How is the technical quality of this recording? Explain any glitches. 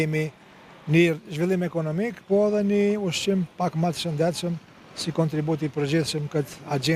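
Nothing here jumps out as a glitch; there are no dropouts, clicks or sudden jumps anywhere in the recording to point to.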